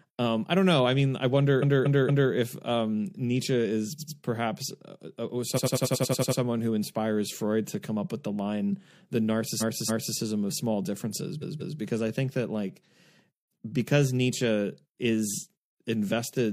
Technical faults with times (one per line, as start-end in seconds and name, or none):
1.58-2.28 repeated frames
3.95-4.14 repeated frames
5.53-6.37 repeated frames
9.57-10.13 repeated frames
11.38-11.75 repeated frames